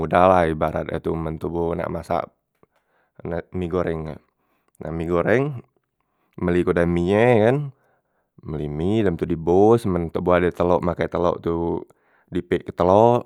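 Speech recording, no audible technical faults.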